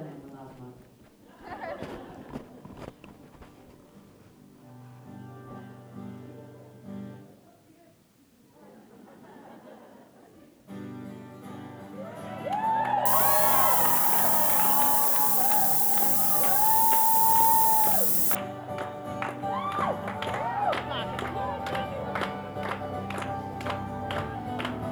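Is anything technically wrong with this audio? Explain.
Yes. From 13.06 to 18.35 s there's low bit depth with noise shaping: the sound drops to just 3 bits, and the rounding error gets pushed up in frequency, so you hear a steady, thin hiss climbing toward the top, about 5 dB louder than the sound itself.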